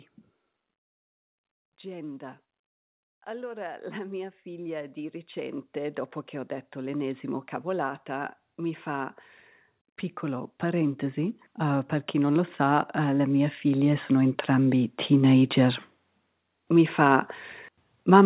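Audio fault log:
3.25–6.04 s, 6.73–8.87 s and 10.2–15.85 s: automatic gain rising. Each time the gain control judged the input too quiet and turned its gain up. It did so slowly, by about 5 dB, then about 4 dB, then about 10 dB over more than five seconds. Speech and background noise get louder together. That shared, gradual swell is the signature of the gain stage.
Throughout, the call path runs through a G.711 mu-law codec, so nothing above 4 kHz is present.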